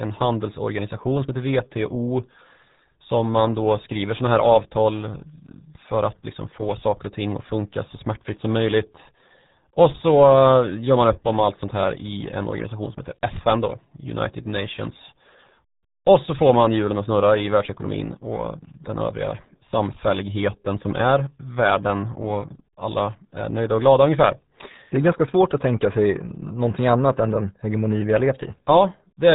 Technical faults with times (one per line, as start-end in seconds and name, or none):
0.00-29.35 RealAudio 14.4 codec